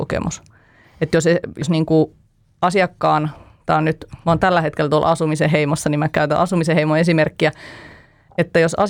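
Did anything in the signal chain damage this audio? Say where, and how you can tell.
Yes. At 1.62 s the speech jumps ahead. This is compressed frames skipped, at the codec stage. Whole frames never reached the output, either missing from the file or rejected by the decoder as damaged. About two frames are lost, roughly 70 ms of audio. The sound suggests a 32 ms frame.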